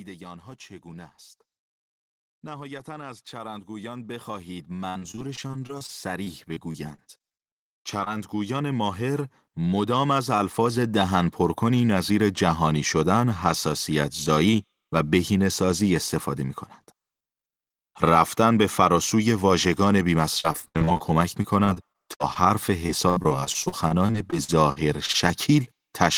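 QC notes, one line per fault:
2.4–11.39 s, automatic gain rising: the gain control judged the input too quiet and ramped up by about 19 dB, so speech and background swell together gradually.
4.89–8.08 s, repeated packet loss (robotic sound): packets kept going missing, each gap of up to 58 ms patched by stretching the last sound, leaving choppy, robotic speech.
20.40–21.12, 21.42–22.43 and 22.86–25.16 s, repeated packet loss (robotic sound): renewed bursts of lost packets, gaps up to 78 ms filled by extending prior audio, so speech turns broken and robotic again.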